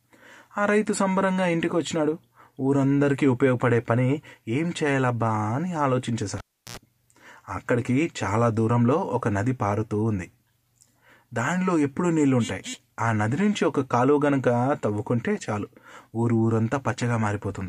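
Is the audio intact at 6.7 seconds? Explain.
No. At 6.7 seconds the speech is gone. A pop at 6.38 s drops the sound into near silence for about 0.34 s, then a brief 60 Hz mains buzz of about 80 ms comes in, and a second pop brings the speech back at 6.77 s. This is a cable pulled and plugged in: the live lead comes out of its socket, and on reinsertion the tip alone touches first, picking up hum before the connection seats fully.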